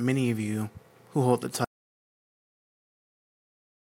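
Audio dropout to silence at 1.65 s: the sound cuts off and stays silent, no room tone, right to the end, likely from a lost input or link.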